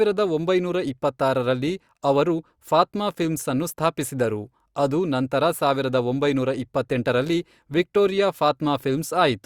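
Nothing technical goes wrong anywhere in this speech recording, so there's no fault to point to at any moment.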